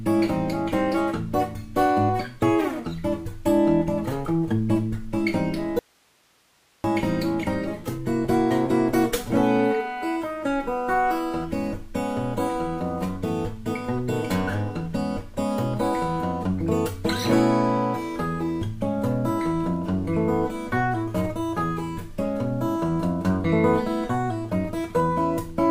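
At 5.79 s the sound cuts off abruptly and returns just as abruptly at 6.84 s, a gap of about 1.05 s. This is an audio dropout to a faint residue: the gap holds only hiss, roughly 40 dB below the normal level. The likely cause is that the wanted signal was lost upstream while the path after the break stayed live. On a waveform the envelope collapses to a thin band of noise; a spectrogram shows a sharp-edged block of flat, low-level broadband hiss.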